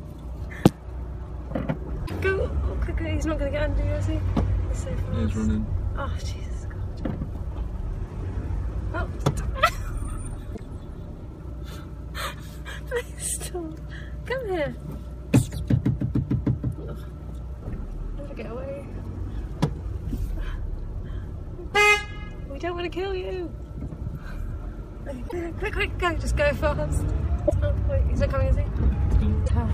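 Damaged data in the compressed stream leaves stretches the decoder cannot read correctly, so it loses sync and hunts for the next valid frame header. Each time, about 80 ms of the sound turns into a short garbled blip: from 2.03 to 2.11 s, 10.52 to 10.60 s, 25.25 to 25.33 s, 27.44 to 27.52 s, and 29.43 to 29.51 s. The bursts bunch together toward the end of the clip.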